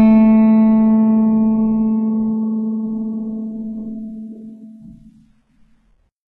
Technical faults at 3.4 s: HE-AAC compression

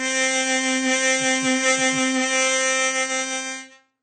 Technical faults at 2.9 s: AAC compression

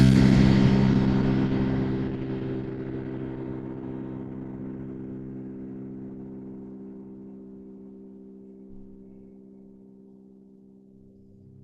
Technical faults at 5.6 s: Opus compression

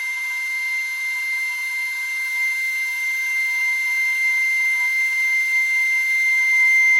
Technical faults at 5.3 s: WMA compression

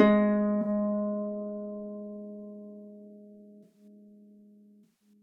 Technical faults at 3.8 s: corrupt frame concealed

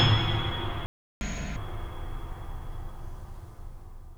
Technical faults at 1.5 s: catch-up at higher speed

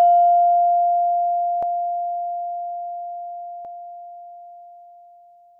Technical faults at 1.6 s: overlapping chunks

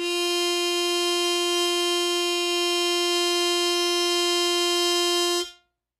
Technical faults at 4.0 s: HE-AAC compression

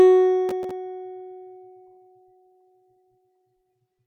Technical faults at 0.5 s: processor overload crackle

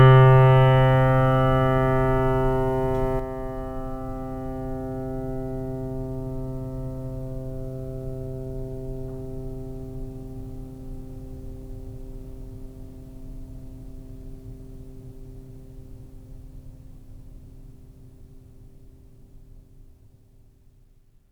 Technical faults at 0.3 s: none

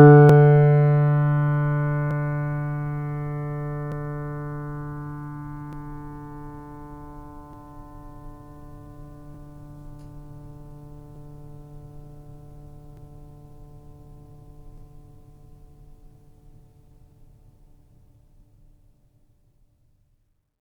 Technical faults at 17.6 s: clock drift buffer slips

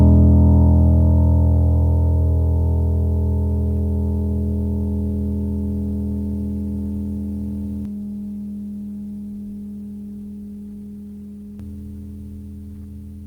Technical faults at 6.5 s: none

